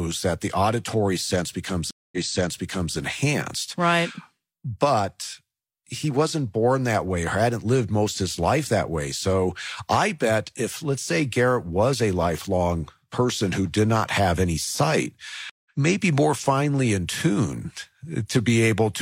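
At 1.91 s a stream reconnect breaks the speech: the connection drops, a 214 ms gap of silence follows, and a fresh decoder picks up 836 ms earlier, so that stretch of speech is heard twice, with the fault running to 2.96 s. A second reconnect at 15.50–15.70 s leaves 156 ms of silence and resumes roughly 150 ms later, skipping a little. On a waveform each shows as a flat gap, and the spectrogram shows a clean blank column with a muted or faded onset after it.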